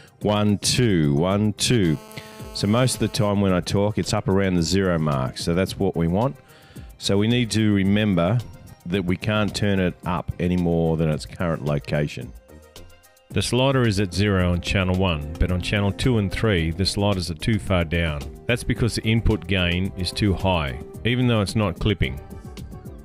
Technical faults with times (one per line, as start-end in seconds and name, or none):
1.83-3.29 GSM phone buzz